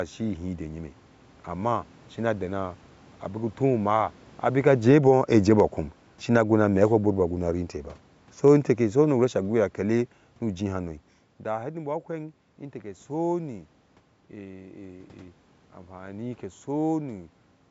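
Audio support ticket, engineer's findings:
Level sags steadily 3.6 to 10.9 s, voice and room noise sinking together by about 12 dB. Automatic gain falling: AGC judged input too loud and wound gain down gradually. Talker shift near 4.5 s overlaps the start.

Single sharp click at 4.83 s, thin vertical line in spectrum, no audible gap. Likely dropped samples: a handful missing, a tiny fraction of a millisecond, so the waveform jumps to a later value and produces a step discontinuity.

Brief swell 5.05 to 5.67 s, voice and background lifting together by about 5 dB mid-descent. Automatic gain rising: AGC read input as too quiet and pushed gain back up briefly, fighting its own downward ramp.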